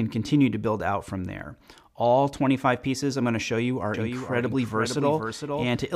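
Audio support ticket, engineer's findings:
Second capture path or edit likely holding two copies out of step: doubled audio track from 3.94 s to end, dry copy about half a second late, roughly 5 dB down.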